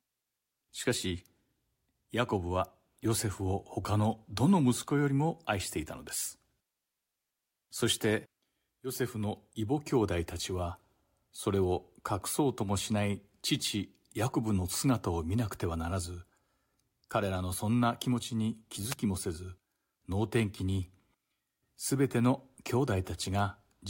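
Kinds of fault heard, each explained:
Wireless microphone noise hit: a brief swish of static, about 50 ms long, from 18.90 to 18.95 s. The FM radio link from the microphone faded as reflected signals cancelled, letting receiver noise surge through until the signal returned.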